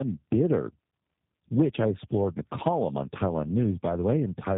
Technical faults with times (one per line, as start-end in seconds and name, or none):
0.00-4.57 tandem speech coding